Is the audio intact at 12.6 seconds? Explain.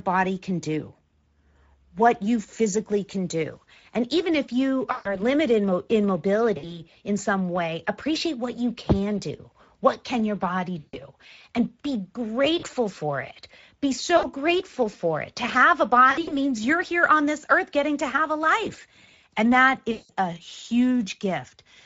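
No. VoIP packet loss concealed by the speech codec occurs from 12.59 to 12.66 s. About 40 ms of audio, consistent with two lost 20 ms frames, is extrapolated by the decoder from its last pitch and filter as a fading buzzy tone or coloured noise. The Speex codec's plainly audible damage also runs through this moment, with starved excitation making the speech noisy and hoarse, which fits a bitrate near 17 kbps.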